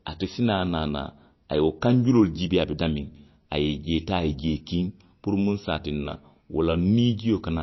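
From start to finish the speech sounds watery and swirly, with a muffled top end and nothing above 5.8 kHz. The likely cause is MP3 compression, fitting a bitrate near 29 kbps: starved of bits, the encoder cuts the treble and lets weak frequency lines flicker between frames.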